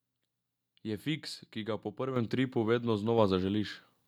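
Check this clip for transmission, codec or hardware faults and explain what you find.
One hardware-side fault shows up. At 2.16 s the whole speech signal and its background noise jump up together by about 7 dB in a single step. This is a microphone volume stepped up event: the call software judged the input too quiet and raised the device's input volume at once.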